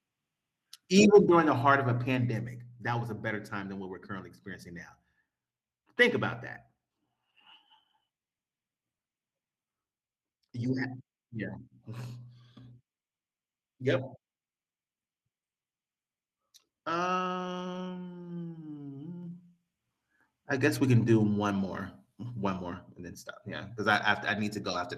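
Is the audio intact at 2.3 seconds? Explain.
No. At 2.31 s, between "the heart of a" and "that was a better", the level drops in a single step. The speech and the background both fall by about 3 dB at once and stay at the new level. This is a microphone volume stepped down. The likely cause is the call software judging the input too hot and lowering the device's input volume in one move, rather than fading it.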